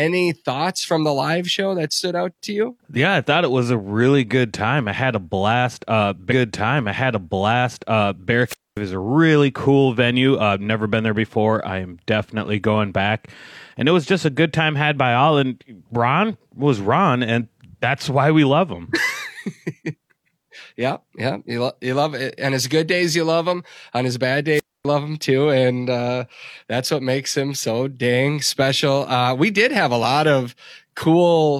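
At 6.27 s a stream segment is repeated. About 2.0 s of speech plays again, with a small blip at the jump back. Wireless microphone squelch dropouts follow at 8.46 s and 24.52 s. The radio signal fades, hiss rises, and the receiver mutes for about 0.23 s and 0.25 s.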